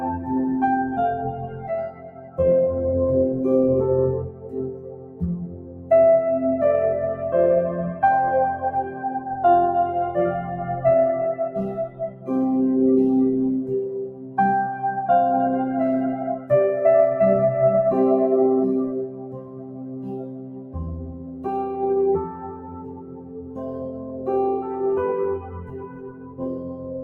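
Noise suppressor applied to music or sounds, throughout the clip: a suppressor tuned for speech is working on material it was not built for. It treats sustained tones, ambience and decaying tails as noise and pulls them down, while sharper onsets slip through. The gain swings by around 15 dB, so the sound pumps and thins as the processor clamps and releases. Sound cut by the noise suppressor happens at 1.32–2.38 s, 4.28–5.91 s, 8.86–9.21 s, 11.88–12.29 s, 14.06–14.38 s, 16.19–16.5 s, 18.88–24.8 s and 25.39–27.03 s. In each stretch the suppressor misjudges the audio as noise and drops it by up to about 11 dB (about 7 dB at 8.86 s). Held and fading parts sink or have their decays truncated. The longest stretch, from 18.88 to 24.8 s, loses roughly five seconds of sustain.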